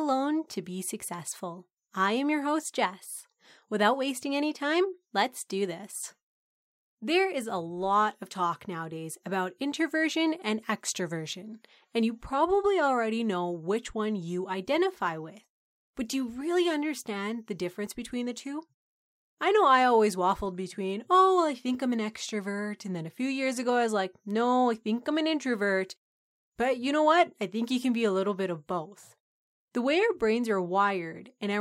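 No technical faults can be heard anywhere in the speech, with the signal holding steady and continuous throughout.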